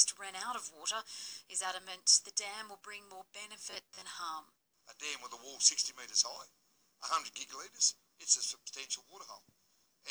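Robotic sound from repeated short buffers, 3.71 to 4.03 s: a rigid metallic buzz near 94 Hz, likely from about half the audio being replaced by repeats of roughly 11 ms segments.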